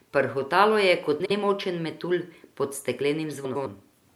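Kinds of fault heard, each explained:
Frames out of order: two neighbouring blocks of coded audio got decoded in swapped order, so a short stretch of speech plays back-to-front by halves, with nothing lost overall. You hear it as a garbled flutter, around 1.20 to 1.31 s with blocks of about 52 ms (fits two frames each), and again at 3.44 to 3.66 s with blocks of about 105 ms (fits four frames each).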